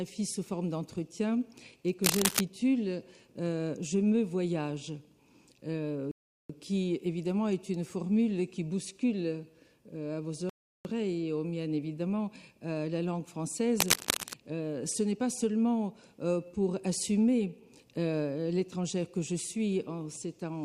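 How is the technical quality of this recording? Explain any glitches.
The recording has two kinds of glitch: two bursts of cable scratch noise and two rebuffering stalls.

From 2.03 to 2.41 s and again from 13.78 to 14.34 s, a dense, ragged scratching sits over the sound at roughly the same loudness as the audio itself. The likely cause is a worn cable or connector being moved, its contact resistance jumping about. Unlike a clean dropout, the sound underneath keeps going.

At 6.11 s the audio falls silent for 0.38 s, and at 10.50 s for 0.36 s, each time picking up exactly where it stopped. The player ran short of downloaded data and waited. Unlike a packet-loss gap, nothing is skipped; time is only added.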